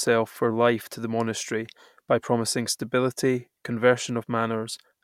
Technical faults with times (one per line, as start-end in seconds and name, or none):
none